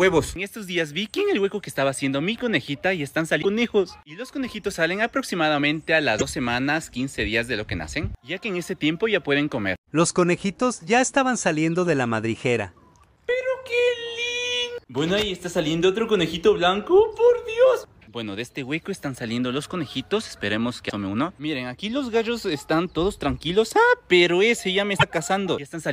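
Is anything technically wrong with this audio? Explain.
Yes. Damaged data in the compressed stream causes brief chirps, squawks, clicks or short holes at 3.38–3.45, 6.18–6.22, 20.86–20.92 and 24.96–25.03 s, where the decoder misreads corrupted frames and loses sync.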